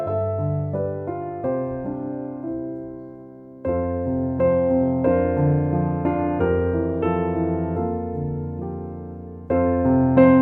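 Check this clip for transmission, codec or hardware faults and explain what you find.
No transmission, codec or hardware faults turn up anywhere in this clip.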